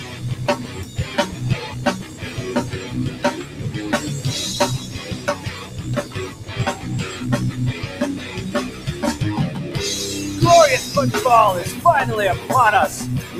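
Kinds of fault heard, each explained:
noise suppressor applied to music or sounds: A speech-tuned noise suppressor stays active on non-speech audio, treating sustained material as noise. Gain swings by about 10 dB, so the sound pumps and thins; a waveform shows a breathing envelope, a spectrogram flickering, patchy energy between onsets.
sound cut by the noise suppressor: Stretches at 0.0–0.23, 0.63–1.01, 2.02–2.23, 3.12–3.61, 4.79–6.85 and 8.71–8.87 s sink by about 5 to 6 dB as held sound is judged noise. Waveforms show sagging envelopes; spectrograms show faded bands and shortened decays.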